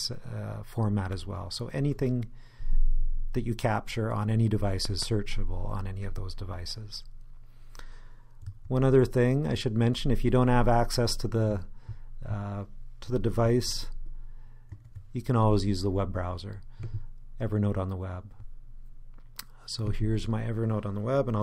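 At about 4.85 s there's a loud pop, actually two in quick succession, wrapping up by around 5.05 s. They jump out a few decibels above the surrounding level, sharp and thumpy, while the sound keeps running underneath. The cause is likely a sudden voltage step or pulse getting into the signal, from a plug, switch, static discharge or driver hiccup, which the downstream circuitry then shapes into that brief double thump.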